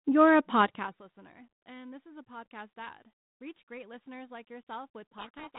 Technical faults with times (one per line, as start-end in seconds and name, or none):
5.18-5.59 codec payload misread